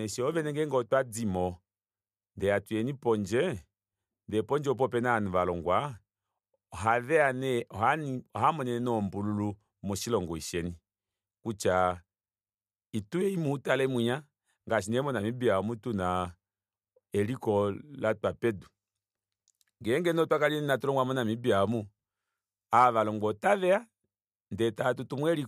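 Nothing here calls for a fix: the speech runs its whole course without a single technical fault turning up along the way.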